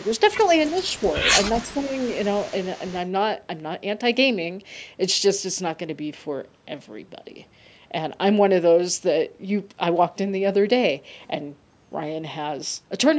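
From 0.00 to 0.19 s and again from 0.67 to 1.15 s, a faint delayed copy of the speech trails the talker by 365 ms, about 25 dB below it. This is echo leak, likely from a far-end loudspeaker echo canceller passing residual pickup back into the call. Between 1.56 and 1.96 s the talker's level dips by up to around 15 dB in pieces totalling about 300 ms. This is speech suppressed in double talk. The canceller likely clamps the near talker while the echo overlaps. That overlapping echo continues from 1.63 to 2.95 s at the same 365 ms delay, now about 30 dB down.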